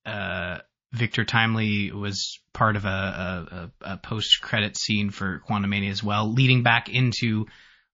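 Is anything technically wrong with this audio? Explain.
Yes. There are two faults: damage from MP3 compression throughout, and one pre-echo.

MP3 compression: Throughout the speech there is plainly audible codec damage. A watery, swirly texture shifts from frame to frame. Sibilants carry metallic chirps, and onsets are smeared. This is likely a heavily bit-starved MP3 encode, which fits a rate of about 32 kbps. At that rate the encoder zeroes weak spectral lines, which then flicker in and out.

Pre-echo: At 1.12 to 1.14 s, a short hiss of about 22 ms runs ahead of a sharp attack, sitting about 11 dB above the surrounding floor. The attack itself sounds softened. The quantisation noise that the codec sized for the loud transient has spread back across the quiet moment before it within a roughly 72 ms transform window. This points to the encoder staying with long blocks rather than switching to short ones.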